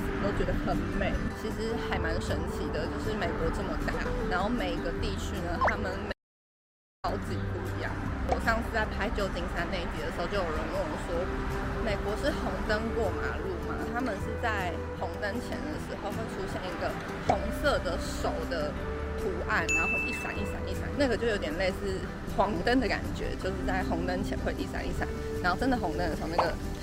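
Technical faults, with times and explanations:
3.89 to 4.08 s and 22.45 to 22.63 s, frames out of order: in each stretch two neighbouring blocks of about 80 ms swapped places and were decoded in that order. The sound there plays with its halves exchanged, giving a brief garbled flutter. No time is lost.
6.13 to 7.04 s, audio dropout to silence: the sound cuts off abruptly into silence with no room tone for about 0.91 s, then resumes mid-flow. This is likely a lost input, with the recorder writing silence, so that stretch is gone.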